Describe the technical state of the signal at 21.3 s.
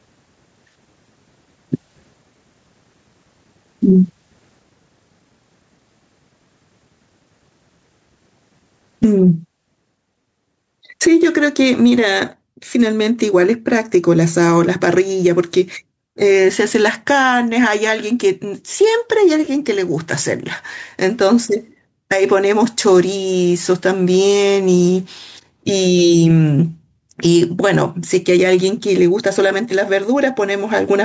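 At 21.3 s the level pumps, a gain swing of about 25 dB, with loud and soft parts squashed closer in level. This is gain pumping, present throughout, likely from excessive mic gain driving a fast limiter.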